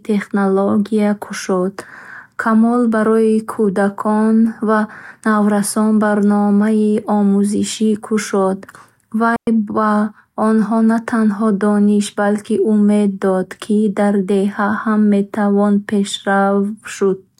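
At 9.36 s the speech drops into a clean hole of near silence lasting about 0.11 s, ending at 9.47 s, with no noise burst on either side. This is a digital wireless dropout: the receiver lost too much data and muted with a very short fade.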